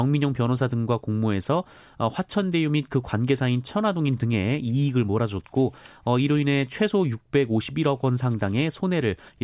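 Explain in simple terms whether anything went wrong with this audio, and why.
Nothing went wrong; the recording has no faults.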